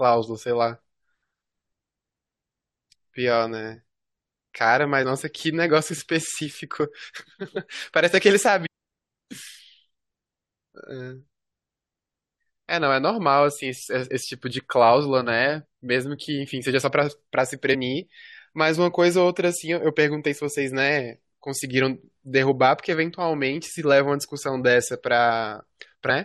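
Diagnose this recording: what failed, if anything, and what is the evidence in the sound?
The failure sits at the codec stage: damaged data in the compressed stream left a short stretch of bytes the decoder could not read correctly, so it lost frame sync and searched for the next valid header. In this speech, that produces a brief glitch from 8.65 to 8.67 s.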